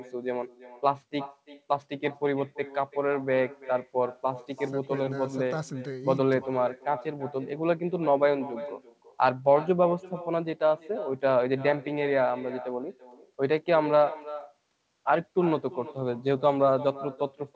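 From start to finish, the speech carries an echo with no canceller. A far-end loudspeaker feeds the microphone, and nothing removes it. Each phrase returns roughly a third of a second later, about 16 dB quieter and thin, with nothing above 8 kHz.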